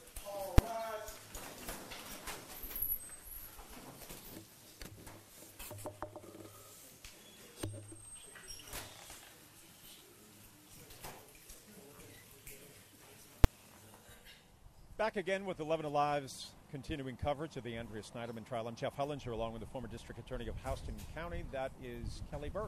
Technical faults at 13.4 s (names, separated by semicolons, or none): invalid numbers at full scale